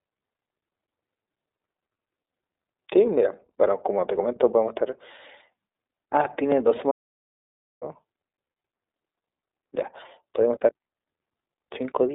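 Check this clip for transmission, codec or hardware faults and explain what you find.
Two faults affect this speech clip: iLBC codec coding throughout and one audio dropout to silence.

Throughout, the iLBC codec confines the speech to a 300 Hz to 3.7 kHz telephone band, with nothing above 3.8 kHz. Each frame's excitation is coded independently, consistent with 30 ms frames at the 13.33 kbps mode, which produces plainly audible rough, synthetic grain. A simple band-limit would not add that roughness.

From 6.91 s to 7.82 s there is an audio dropout to silence, lasting about 0.9 s. It most likely comes from a lost input that was recorded as silence. The gap is dead silence with no room tone, unlike packet-loss concealment, which fills gaps with buzzy or repeated sound.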